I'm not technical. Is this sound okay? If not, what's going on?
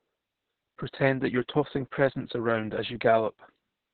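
No. Opus voice compression runs through the whole clip, squeezing the speech very hard. It throws away everything above about 4.3 kHz and rebuilds the voice from a rough model, so it sounds muffled, hoarse and faintly robotic, like a poor phone line.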